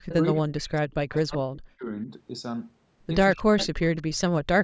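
A faint, delayed copy of the speech surfaces in a short scrap from 0.08 to 0.14 s, sitting around 15 dB under the main voice and trailing it by about 234 ms. This is an echo leak: the far end was likely playing the call over a loudspeaker, and its echo canceller let part of what its microphone captured slip back down the line.

From 0.22 to 1.89 s the voice repeatedly sinks, thins and drops out in pieces, at worst by something like 40 dB, for roughly one and a half seconds in total. This is speech suppressed in double talk: with both sides talking at once, the canceller likely could not tell the talker from the loudspeaker echo and turned everything down. Inside that stretch, from 1.13 to 1.38 s, the same 234 ms echo returns, weaker, around 25 dB below the speech.

From 3.35 s to the end the dipping and chopping comes back, with drops again near 40 dB covering about a second. Two more echo scraps cut through it, from 3.58 to 3.66 s at around 15 dB down and from 3.97 to 4.02 s at roughly 35 dB down. 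Both arrive with the same 234 ms lag, which ties all four scraps to one leaking echo path.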